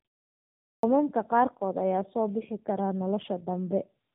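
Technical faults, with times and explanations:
throughout: tandem speech coding. The speech is rougher, more muffled and more warbly than a single narrowband coder would leave it, with nothing above 3.8 kHz. That fits two AMR-type coding passes in a row, each re-coding the previous one's artefacts, so the damage compounds.
0.72–0.83 s: clipped start after a pause. After 0.72 s of silence the output device is still waking, so about 113 ms of the speech's beginning is swallowed and it bursts in abruptly. Here real speech is lost.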